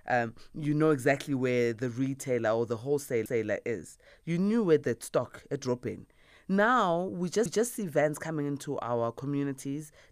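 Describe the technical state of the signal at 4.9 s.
At 4.9 s the speech signal is intact, with no audible dropout, distortion, clipping or other fault.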